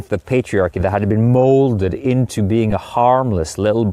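Lost LE Audio frames at 2.70 to 2.73 s, just after "had been molded into": about 15 ms dropped out, which fits two 7.5 ms frames. The LC3 decoder filled the gap by replaying the last spectrum with random signs, so the speech briefly smears into a noisy blur.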